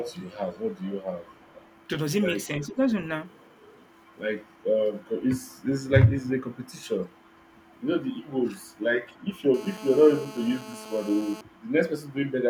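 A far-end echo canceller likely let part of its loudspeaker pickup through, producing an echo leak: a faint copy of the speech trailing it by 336 ms, well below the main talker, from 0.0 to 1.87 s and again at 2.62–2.68, 3.28–3.78, 6.65–6.72, 7.26–7.47 and 8.71–9.41 s, quietest in the later stretches.

Around those moments both ends were talking, and the canceller likely could not separate talker from echo, so speech was suppressed in double talk. The voice dips by around 10 dB for a brief span at 2.56–2.79 s and again at 8.45–8.6 s.

From 9.54 to 11.41 s, a nearby 2G handset on a call pulses its transmitter at 216.7 Hz, and the audio circuitry rectifies those bursts into GSM phone buzz: a steady, raspy, harmonic-rich drone about 17 dB under the signal, unrelated to the speech.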